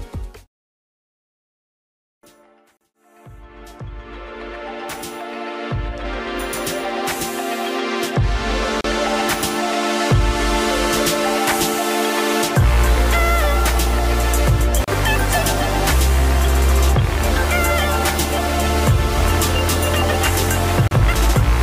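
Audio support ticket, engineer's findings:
Short dropouts, abrupt edges smeared, sound resumes where it stopped: 2.77 s (39 ms), 8.81, 14.84, 20.88 s (34 ms each), every 6 s. Gap at a join of encoded pieces: untrimmed encoder delay and last-frame padding between separately encoded pieces.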